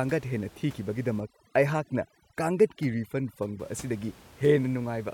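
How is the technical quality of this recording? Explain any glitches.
The recording has one glitch, overdone noise removal, from 1.20 to 3.60 s. Room noise sits about 24 dB below the speech. In that span, an aggressive noise reducer shuts off bands near its noise estimate, taking quiet speech detail too. The background drops and breaks up into twinkling specks. A spectrogram shows scattered isolated dots amid blank gaps.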